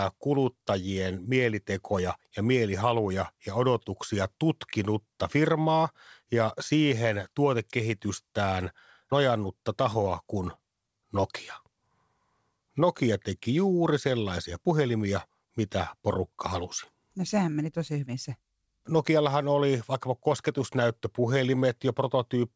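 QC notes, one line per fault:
9.94–10.90 s, scattered short gaps: about five tiny packet losses, each around 20 ms or less, concealed by stretching the preceding sound, leaving brief ticks and smears.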